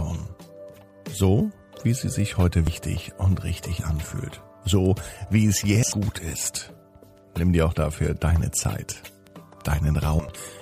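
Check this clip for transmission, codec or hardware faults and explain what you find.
Three codec faults turn up. Compressed frames skipped at 2.67–2.95 s, 5.83–5.92 s and 9.92–10.29 s: missing or rejected frames make the audio jump ahead about 100, 300 and 100 ms.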